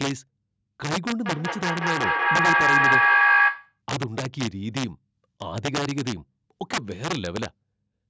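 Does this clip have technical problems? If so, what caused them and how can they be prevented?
Yes. Integer overflow runs through the whole clip. The loudest peaks, driven about 8 dB past full scale, wrap to the opposite sign instead of being limited, which produces violent cracks on roughly one percent of samples. A waveform shows spikes that jump from one extreme to the other. Saturating arithmetic or a limiter ahead of the gain stage prevents this.

A feedback howl runs from 1.25 to 3.8 s. A second device in the room picks up the loudspeaker and sends it back, gaining level on each trip. The loop narrows to a tone near 1.5 kHz, peaking about 9 dB above the speech, with the loop repeating roughly every 200 ms. A spectrogram shows a bright horizontal line. Muting one device or using headphones prevents it.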